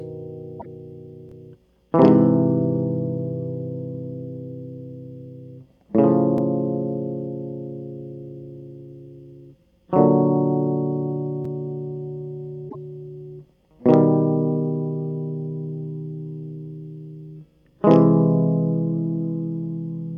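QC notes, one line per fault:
0.56 to 0.66 s: damaged data in a compressed stream. For about 90 ms, a burst of corrupted bytes makes the decoder misread the music's frames and lose sync while it searches for the next valid frame header. The garbled output in that gap is heard as a brief chirp, squawk, click or short hole.
12.66 to 12.75 s: damaged data in a compressed stream. A second run of bad data, again about 95 ms, briefly breaks frame sync and gives the same short blip.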